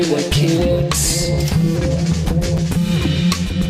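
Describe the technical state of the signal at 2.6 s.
A brief jumbled flicker at 2.57 s comes from chunks out of order: one 5.8 ms chunk plays a chunk late, leaving three hard joins.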